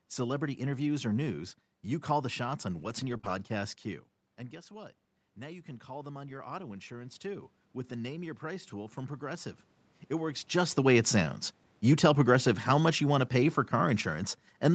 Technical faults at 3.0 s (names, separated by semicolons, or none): lost packet rebuilt from error correction